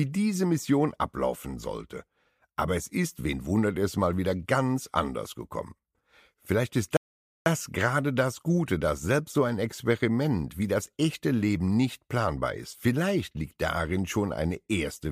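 The audio has a rebuffering stall from 6.97 to 7.46 s: playback ran dry, fell silent for about 0.49 s, then resumed exactly where it stopped, with nothing missing. A waveform shows a flat gap, and a spectrogram a blank vertical band.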